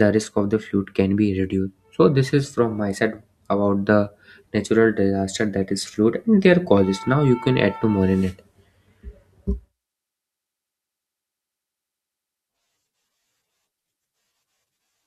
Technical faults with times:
none

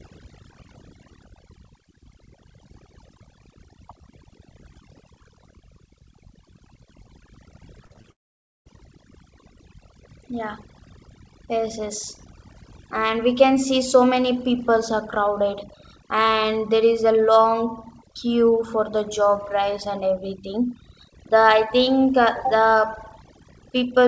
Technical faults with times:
0.00-24.07 overdone noise removal
7.86-8.06 repeated packet loss (robotic sound)
8.12-8.67 long network dropout

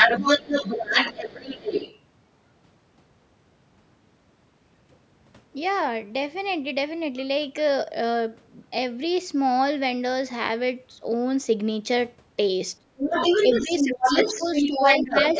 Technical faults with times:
0.00-1.99 other side's voice leaking through
12.80-13.20 speech suppressed in double talk
12.96-15.39 other side's voice leaking through
13.45-15.15 speech suppressed in double talk

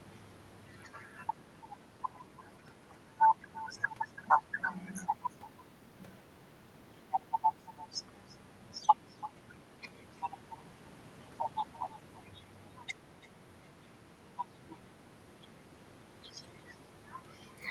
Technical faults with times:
0.00-17.70 echo with no canceller

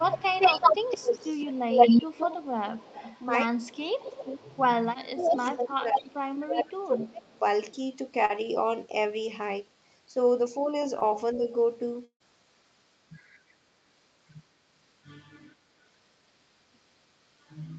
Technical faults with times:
0.00-3.23 echo leak
3.45-4.30 speech suppressed in double talk
3.58-4.58 echo leak
4.82-7.42 speech suppressed in double talk
5.20-5.43 echo leak
6.08-6.44 echo leak
6.93-7.39 echo leak
8.25-8.45 short concealed packet loss
10.99-11.03 short concealed packet loss
11.34-11.48 speech suppressed in double talk
12.05-12.22 burst of packet loss

